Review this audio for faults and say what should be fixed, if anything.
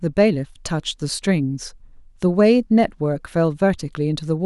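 Nothing in this speech recording needs fixing. No fault can be heard at any point in it.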